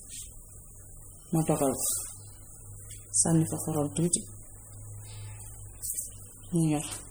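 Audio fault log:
Throughout: MP3 compression, likely the cause of the damage, starved of bits in a way that fits a low bitrate around 48 kbps. With too few bits, the encoder drops weaker frequency lines and brings them back from frame to frame, so the speech takes on a plainly audible watery, swirling texture, with chirpy sibilants and smeared onsets. The band still reaches to about 21.1 kHz, with nothing above that.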